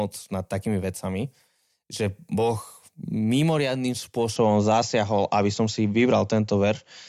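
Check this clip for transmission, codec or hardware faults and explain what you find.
One fault is audible. From 4.36 s to the end, the speech abruptly turns duller and shifts in level by roughly 5 dB, with no gap at the change. Nothing remains above 7.6 kHz, and a faint new background noise sits far below the voice. The likely cause is the input switching to a poorer device with a narrower band and its own tone, gain and noise floor.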